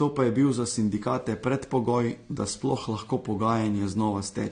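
From start to finish the speech has nothing above about 9.7 kHz, and two flavours of codec smearing sit on top of each other. That's likely transcoding between lossy codecs: a low-rate AAC pass, then Vorbis re-encoding those artefacts and adding its own.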